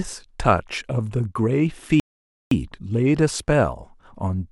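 At 2.00 s the speech drops into silence for about half a second, a rebuffering stall, then picks up exactly where it stopped, adding 515 ms.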